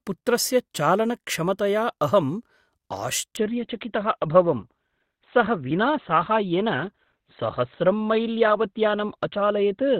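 At 3.37 s the audio drops to a lower-bitrate stream in an adaptive stream and stays there to the end. The change is abrupt, with no gap, and the sound turns dull. A spectrogram shows everything above 4.5 kHz suddenly cut off, which fits a switch to a low-rate Opus stream.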